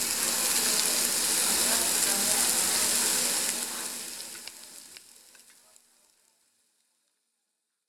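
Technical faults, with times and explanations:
No technical faults detected; the level tapers off in a smooth fade-out from about 3 s with no click or hard edge.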